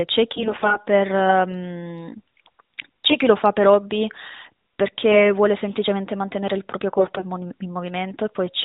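AMR bit errors strike at 0.34 to 0.88 s, 5.12 to 5.33 s and 6.98 to 7.26 s. In each burst a noisy radio link flipped roughly 7 percent of the weakly protected bits in the narrowband AMR frames, so misplaced excitation pulses and skewed gain and spectral values reach the decoder. Pitch and loudness roughly hold, but the speech turns hoarse, scratchy and gargly, against a band-limited codec sound that fits the 12.2 kbps mode.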